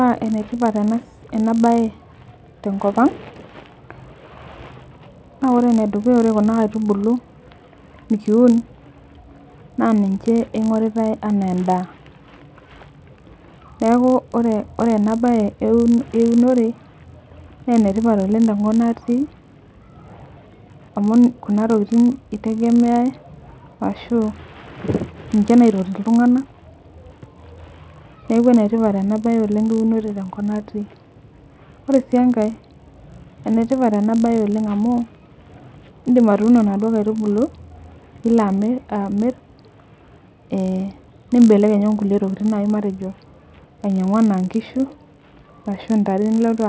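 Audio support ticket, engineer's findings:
Resampler restarted on every block: 50 Hz buzz under speech throughout, absent in pauses. Errors at 20 ms block edges show as evenly spaced vertical spectrogram lines.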